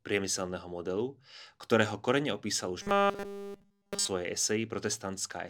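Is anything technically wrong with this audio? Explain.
Yes. From 2.82 to 4.08 s there is robotic sound from repeated short buffers: a rigid, metallic 200 Hz buzz, likely from a 5 ms chunk looping in place of essentially all the incoming speech.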